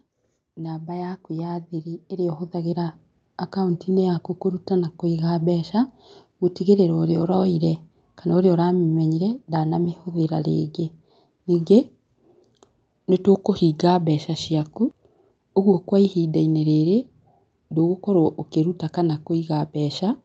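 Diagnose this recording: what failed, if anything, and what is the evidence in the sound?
The automatic gain rising is in call processing. From 0.42 s to 5.72 s the level climbs steadily by about 12 dB, speech and background noise swelling together. The AGC judged the input too quiet and wound its gain up slowly.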